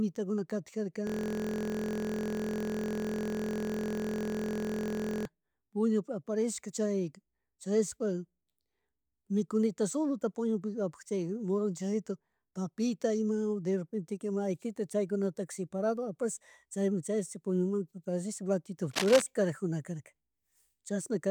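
Speech in this clip is interrupted from 1.07 to 5.26 s by a steady buzz at 43.1 Hz: a system hang loop, where the system froze while the audio hardware kept replaying one 23.2 ms stretch of its ring buffer about 180 times, which fits a 1024-sample buffer. From 18.91 to 19.26 s a harsh, uneven scratching sits over the speech, only a little quieter than it. This cable scratch noise likely comes from a worn cable, connector or control being moved.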